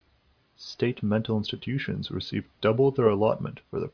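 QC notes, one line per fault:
No audible faults found in this speech recording.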